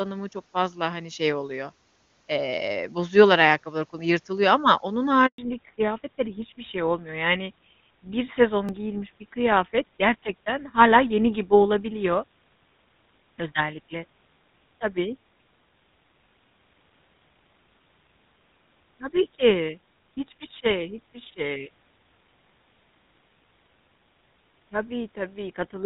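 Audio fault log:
5.26 to 5.38 s, handover gap: the sound dies away within a few tens of milliseconds and stays silent for about 120 ms before resuming. This is the call being passed from one network to another. While the link switched over, no speech frames reached the receiver, so there was nothing to decode or play. Whatever was said inside that window is gone, not just muted, and the sound picks up again only once the new connection starts delivering frames.
5.38 s to end, fallback to narrowband: right after the handover, everything above 4 kHz disappears and stays gone, and the speech turns duller and rougher. Up to that point the wideband AMR-WB HD Voice codec carried the call cleanly with little or no audible coding damage. The call then dropped to an older narrowband codec, most consistent with GSM full rate. That codec band-limits the audio to 4 kHz and adds its own coarse texture.
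8.69 s, block of digital silence: a tiny hole of about 1.45 ms, heard as a tick or dip rather than a gap. A short run of samples, which fits a 64-sample block, was replaced by zeros. This is typically the output buffer not being filled in time. Because the signal drops straight to digital silence and jumps back with no fade, each edge produces a discontinuity, and the two edges sit very close together.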